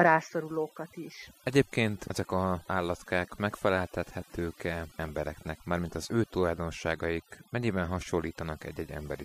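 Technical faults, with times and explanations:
Throughout: overdone noise removal. Noise reduction set too strong switches off frequency bands near the noise floor, leaving twinkling near-silence and taking quiet parts of the voice with them.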